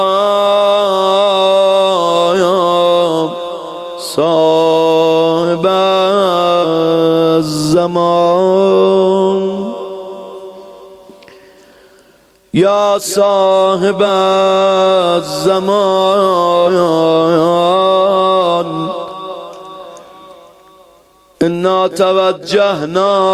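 Compressed frames skipped: whole 46.4 ms frames were dropped at 6.62–6.65, 14.05, 16.65–16.68 and 19.02–19.06 s. The audio jumps ahead roughly 200, 50, 100 and 100 ms.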